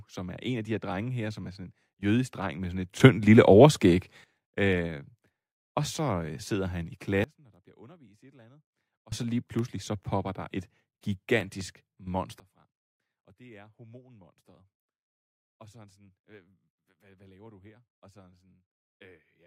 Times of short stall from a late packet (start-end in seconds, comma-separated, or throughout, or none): none